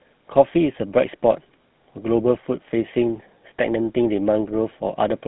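From start to finish, the speech carries the sound of the GSM full-rate codec. The coder models the vocal tract and drives it with regularly spaced pulses. Only every third excitation sample survives. The result is a buzzy, gravelly roughness that is plainly audible throughout. Nothing is heard above about 3.9 kHz, so the top end is cut away. The degree of damage fits a 13 kbps GSM full-rate stream.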